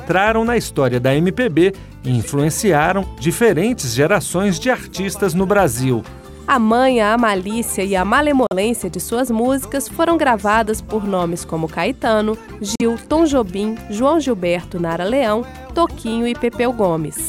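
At 8.47 s and again at 12.75 s, the sound cuts to silence for about 60 ms. These are likely Bluetooth dropouts. Packets missed their deadline and were discarded, which fits two lost frames each time. Playback resumes further along, as if it had played on.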